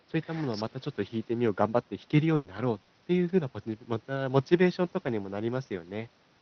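A burst of packet loss runs from 2.35 to 2.47 s. Several consecutive packets were lost or arrived too late, so the receiver stretched the last sound for about 100 ms, turning it down as it went. It sounds like the last sound held and fading out, and about 100 ms of speech is skipped before the audio picks up again.

A lost packet rebuilt from error correction appears at 2.45 to 2.47 s, 2.57 to 2.59 s and 3.29 to 3.31 s. Each time, a 20 ms stretch was played from a low-bitrate copy carried in the next packet, so nothing drops out. Those frames sound grainier and noisier than the audio around them.

A short concealed packet loss falls at 2.85 to 2.91 s. About 40 ms never reached the decoder, which filled the hole by extending the preceding sound and then blending back in. It is heard as a brief smear or wobble, and about 40 ms of speech is missing.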